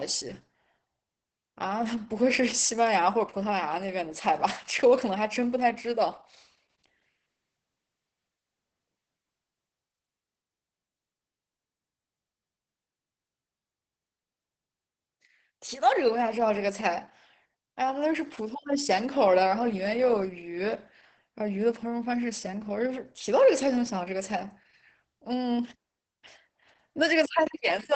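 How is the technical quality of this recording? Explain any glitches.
The recording is heavily degraded by low-bitrate Opus voice compression across its full length. The speech is muffled, hoarse and slightly robotic. The sound stops near 8 kHz because the codec is running in SILK wideband mode, which predicts each short frame from a linear-prediction model and codes the leftover excitation coarsely. The roughness and buzz point to a bitrate of roughly 10 kbps with 20 ms frames, too little for natural detail.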